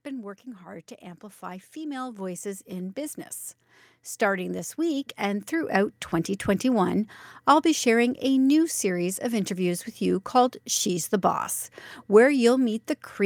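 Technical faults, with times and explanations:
0.63–3.05 s and 4.18–6.05 s, automatic gain rising: just after "been working", the level climbs steadily by about 8 dB over roughly two and a half seconds, then again by about 6 dB over nearly two seconds. The automatic gain control judged the input too quiet and pushed its gain up gradually, so the speech and the background noise swell together rather than the speech alone getting louder.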